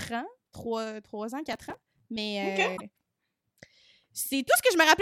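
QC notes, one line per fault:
1.53–2.00 s, processor overload crackle: Right after "trois ans", a gritty tearing rides on the speech for about half a second. The processor misses its deadlines many times in a row, around fifty. Each missed buffer is skipped, leaving a tiny hard-edged gap. The gaps come so fast that they fuse into crackle. Their spacing fits a buffer of about 1.5 ms. The crackle stops once the load passes.
2.76–2.81 s, broken MP3 bit reservoir: For about 56 ms the speech breaks and jumps forward. That span is roughly two MP3 frames, which fits the 26.1 ms frame length. The likely cause is frames cut from the stream. MP3 frames borrow bits from earlier frames. After the cut, the next frame reaches back for its data and finds bytes from the wrong frame. It cannot decode cleanly until the reservoir refills.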